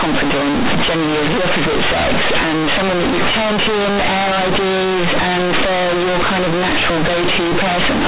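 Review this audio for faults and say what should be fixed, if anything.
Companded audio read as linear runs through the whole speech clip: mu-law bytes are played as raw 8-bit samples without expansion, so every sign change throws the output across half its range. Unlike ordinary clipping, quiet passages and pauses roar as loudly as speech. Decode mu-law through its expansion table before playback, and keep the format tag on the stream so it is never read as linear PCM.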